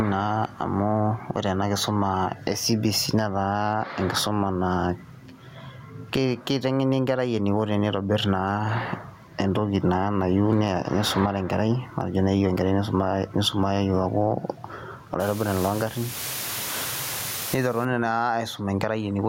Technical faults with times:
0.00-19.29 gain pumping
15.20-17.85 low bit depth with dither

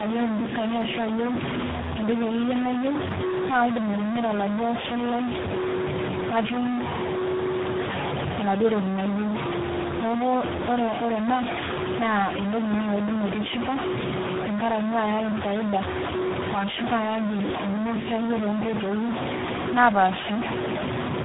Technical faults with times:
0.00-21.25 low bit depth without dither
0.00-21.25 tandem speech coding

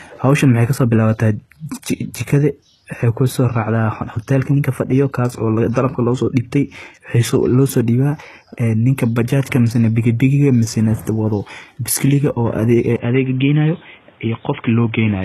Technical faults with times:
0.00-15.25 HE-AAC compression
12.96-15.25 input switched to a poorer device

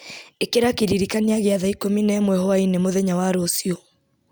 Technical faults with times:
none

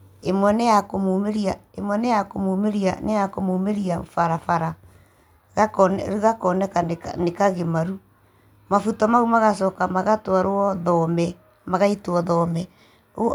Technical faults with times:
none

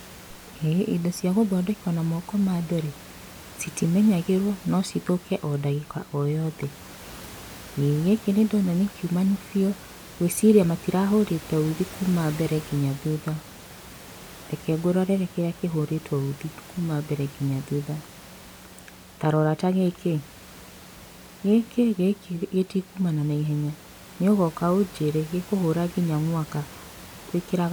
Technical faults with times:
none

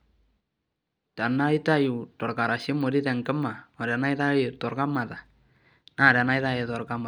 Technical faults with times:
none

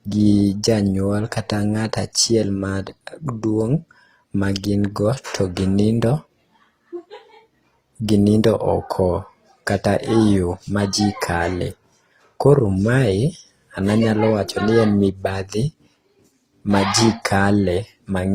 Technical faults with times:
0.00-18.34 transcoding between lossy codecs

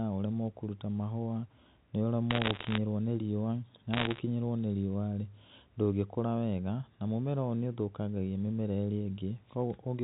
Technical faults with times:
2.31-2.78 bit errors on a digital phone line
3.94-4.20 bit errors on a digital phone line

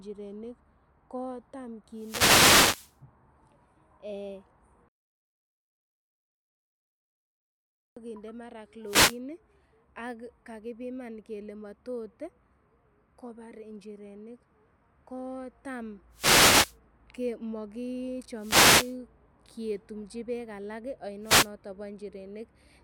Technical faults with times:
1.92-2.98 wireless microphone noise hit
8.85-9.19 wireless microphone noise hit
16.11-16.77 wireless microphone noise hit
18.35-18.97 wireless microphone noise hit
21.22-21.50 wireless microphone noise hit

